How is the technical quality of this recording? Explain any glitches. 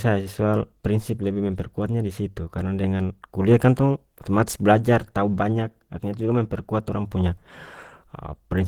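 The recording is technically compromised by one fault, heard from start to finish: plainly audible Opus compression damage, likely the cause of the degraded sound. The speech comes across as hoarse, grainy and muffled rather than swirly, which fits Opus running in its hybrid speech mode at a low rate, around 16 kbps. In that mode, speech-coding methods handle the lower band while the upper region keeps only coarse band energies and is filled in with folded or noise-like content. Treble is still present up to about 20.2 kHz, but its fine detail is lost.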